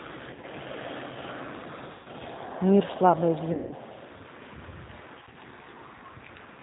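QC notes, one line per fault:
throughout: G.729 codec. Speech is rebuilt at 8 kbit/s from a vocal tract model, a pitch predictor and a few pulses per frame. Nothing above 4 kHz gets through. The speech stays intelligible but plainly rough and synthetic.
0.31–0.45 s, 1.92–2.08 s, 3.53–3.74 s, 5.21–5.39 s: VoIP packet loss concealed by the speech codec. About 70, 130, 180 and 60 ms went missing. The first and last losses are short scattered gaps. The decoder stretches its last pitch and filter into a fading buzz or coloured noise. Speech stays weak briefly afterwards.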